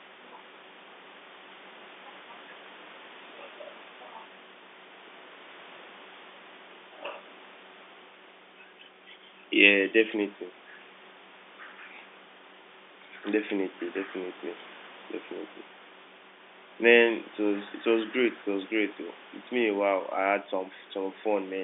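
No technical fault can be heard in this speech recording, which carries the narrow band of an ordinary telephone line from roughly 250 Hz up to 3.6 kHz, as expected of G.711 mu-law telephone coding.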